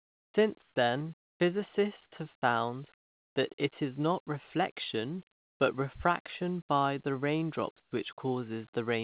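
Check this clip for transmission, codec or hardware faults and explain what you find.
Two faults appear in the pauses of this speech, with everything passing through a narrowband call path whose cut-off at 4 kHz points to G.711 mu-law at 64 kbps.

Comfort noise in place of the background: at 0.00–0.34, 0.62–0.76, 1.22–1.40, 2.94–3.36, 5.32–5.60 and 7.80–7.92 s, the room tone turns flat and featureless and drops by about 6 to 25 dB. The likely cause is discontinuous transmission, with the receiver synthesizing noise during the gaps.

Onset clipped by the voice detector: at 0.26–0.34 s (80 ms) and 2.40–2.42 s (20 ms), sound begins abruptly, missing its soft start. The detector probably reacted late, so the first moments went unsent and the receiver played synthetic noise in their place.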